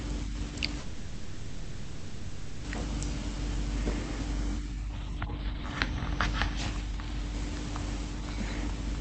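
Delayed packets likely emptied the jitter buffer, a call audio freeze: from 0.79 to 2.66 s the last sound fades out, then speech resumes intact.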